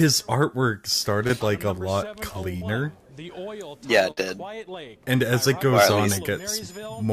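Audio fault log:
1.27 to 1.31 s and 2.57 to 2.63 s, short concealed packet loss: twice, a sliver of the stream failed to arrive in time, about 20 ms at the first point and 40 ms at the second. The decoder covered each hole by extending whatever sound came just before, carrying its pitch forward or substituting shaped noise, then crossfading into the real signal. Each spot comes across as a quick smear or wobble, longer at 2.57 s.
4.11 to 4.19 s, burst of packet loss: a run of about 60 ms was lost or arrived too late to play. The receiver extended the preceding sound across the whole gap and let it decay, so it turns into a brief held buzz or a fading hiss instead of continuing naturally. When playback picks up again at 4.19 s, the 60 ms that should have filled that stretch is simply gone.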